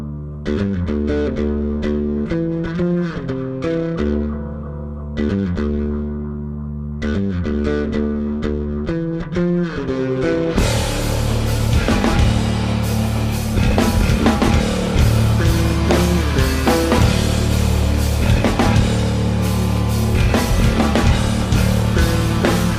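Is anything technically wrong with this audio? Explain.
No, nothing technically wrong can be heard here.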